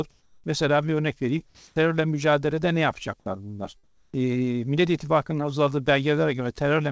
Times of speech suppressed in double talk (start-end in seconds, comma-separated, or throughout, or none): none